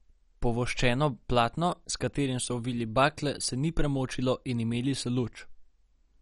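From start to finish the speech sounds dull and gurgling, with a granular roughness, most likely from MP2 compression at a low bitrate around 48 kbps. A spectrogram shows nothing above 11.3 kHz and upper sub-bands flickering on and off as bits run short.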